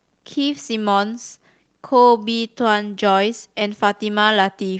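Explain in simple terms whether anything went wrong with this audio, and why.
Nothing went wrong; no faults can be heard here.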